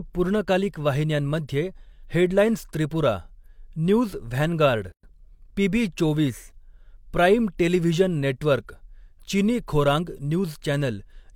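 At 4.92 s the speech drops out for about 113 ms, resuming at 5.03 s: a gap at a join of encoded pieces. The audio was encoded in separate sections, 10 s apart, and spliced untrimmed, so one section's padded final frame and the next one's start-up delay both survive as silence. Unlike a dropout, nothing is missing. The sound picks up exactly where it halted, and the edges are softened by the codec rather than clicking.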